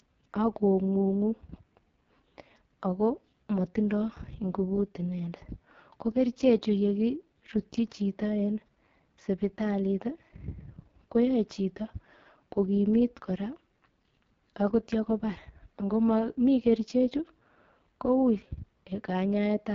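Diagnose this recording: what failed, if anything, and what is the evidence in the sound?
The failure is at the codec stage: the whole clip has been through the AMR wideband (HD Voice) codec at one of its lowest rates, and it shows throughout. The speech has that rough, raspy texture you get when the pulse-driven vocal tract model is starved of bits, which fits the 6.6 kbit/s bottom mode. The top end stops dead at about 7.3 kHz, and the band just below that cutoff is filled with noise.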